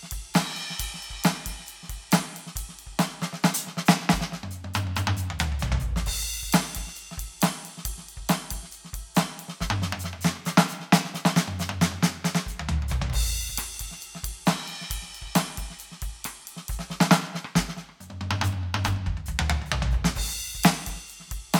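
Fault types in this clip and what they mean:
There are no fault types in this music clip.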